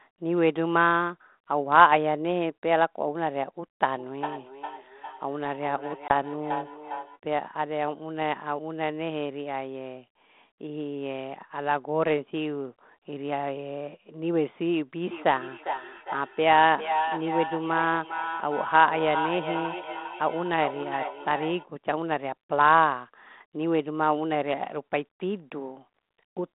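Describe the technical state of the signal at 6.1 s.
A hard-edged hole cuts the speech from 6.08 to 6.11 s, about 20 ms of silence, and the sound comes back with brief, slight distortion that settles over the next few tens of milliseconds. This is packet loss on an ADPCM call, roughly one packet dropped. Because G.726 at 32 kbit/s codes only differences from an adaptive prediction, the decoder's predictor and step size fall out of step with the sender's until they re-adapt.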